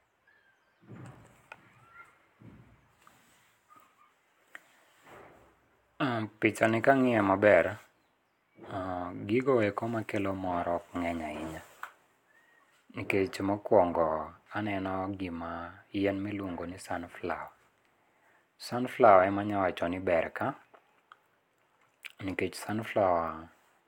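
No technical faults can be heard anywhere in the audio.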